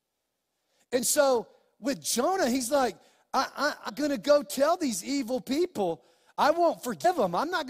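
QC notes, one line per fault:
3.88–3.90 s and 7.04 s, damaged data in a compressed stream: a short blip between "he's like I" and "going to go tell", then another near the end. Corrupted bytes make the decoder misread those frames and lose sync, producing a brief glitch before it recovers.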